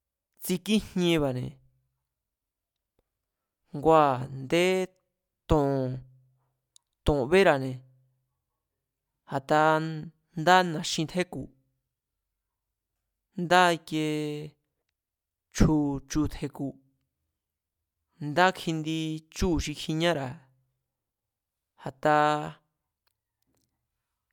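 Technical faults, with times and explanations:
Nothing in this recording stands out as a technical fault; the audio just runs along without a hitch.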